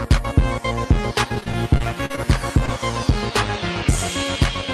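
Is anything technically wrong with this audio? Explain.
Yes. From 1.35 to 2.20 s there is repeated packet loss (robotic sound): packets kept going missing, each hole up to 40 ms patched by extending prior audio, so about 17% is synthetic and choppy.

At 2.66 to 2.69 s, a short concealed packet loss: about 20 ms never arrived and was filled by continuing the previous sound, leaving a brief smear.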